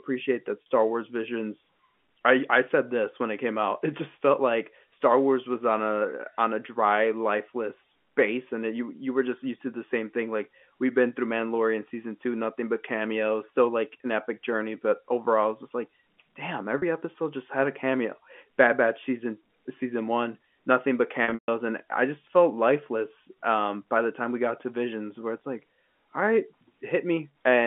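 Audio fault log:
0.62 s and 16.78 s (after "was just like damn", before "episode just had a"): packet loss with pitch repetition, about 40 ms gaps, likely two 20 ms packets, bridged by repeating the last pitch period, giving a brief held, buzzy note.
21.24–21.48 s (after "season one nothing but", before "and I just felt"): packet loss with pitch repetition, 200 ms missing in bursts, the longest 140 ms. The repeated pitch period fades to silence, and the sound returns through a short cross-fade. The audio sits on a G.711 telephone band of roughly 200 Hz to 3.4 kHz.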